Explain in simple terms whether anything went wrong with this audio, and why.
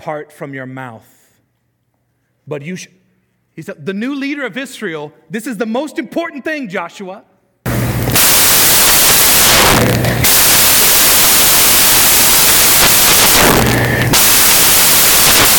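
At about 7.66 seconds, the software reading the file began building each sample from the wrong bytes, putting the pieces of every number together wrongly. From there to the end, the speech turns into loud, harsh hiss.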